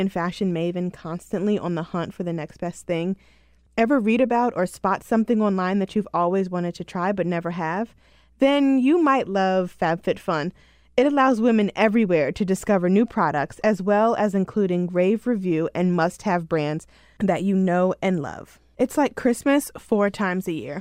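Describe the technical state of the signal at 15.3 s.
At 15.3 s the speech signal is intact, with no audible technical fault.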